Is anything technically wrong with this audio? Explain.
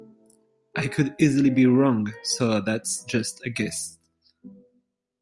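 No, nothing technically wrong turns up anywhere in this bit of speech, so there's nothing here to flag.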